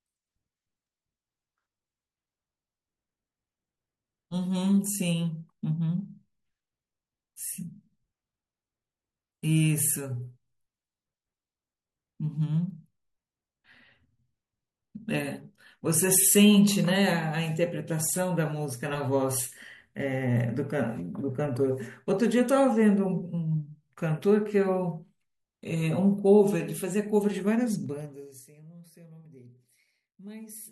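From 27.85 to 28.44 s there is zipper noise. The speech level drops by roughly 25 dB in unsmoothed 2 dB steps, around thirty a second. Each step clicks. The fade sounds like a fast ticking zip.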